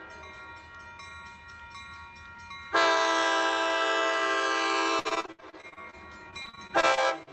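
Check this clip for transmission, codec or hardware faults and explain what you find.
Repeated packet loss (robotic sound) occurs twice, from 4.99 to 5.95 s and from 6.31 to 7.29 s. Packets went missing in quick succession. Each hole, up to 66 ms and 40 ms respectively, was filled by extending the last sound, so about 37% and 21% of those spans sound choppy, with pieces missing.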